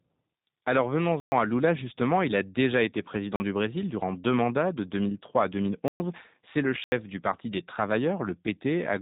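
G.729 coding runs through the whole of this speech clip. Nothing above about 3.8 kHz survives, and the plainly audible roughness and slightly synthetic quality fit an 8 kbit/s G.729A stream. That codec rebuilds each 10 ms frame from a vocal-tract filter, a pitch predictor and a handful of pulses rather than sending the waveform itself. The sparse pulse excitation makes the speech sound grainy and artificial even though it remains intelligible.

Blocks of digital silence cut through the audio at 1.20–1.32 s (120 ms), 3.36–3.40 s (40 ms), 5.88–6.00 s (120 ms) and 6.84–6.92 s (80 ms). In each of these spans the sound cuts out and then resumes with no fade in either direction. The 40 ms gap comes across as a brief dropout, while the 80 ms and 120 ms gaps are heard as distinct holes in the speech.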